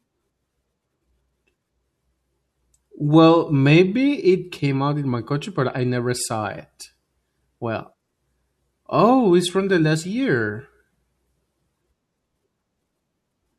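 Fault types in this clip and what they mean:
No faults of any kind can be heard in this speech.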